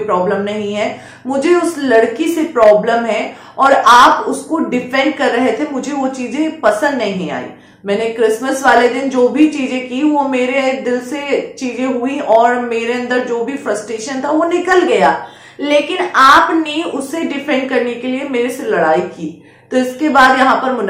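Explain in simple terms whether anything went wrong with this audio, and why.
From 14.88 to 16.93 s everything plays 5.8% fast and nearly a semitone sharp, then snaps back, likely a drift correction step between mismatched clocks.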